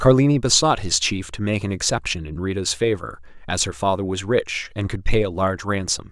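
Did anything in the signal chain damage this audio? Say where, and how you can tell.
No, nothing stood out on listening that would point to damage anywhere in the signal chain.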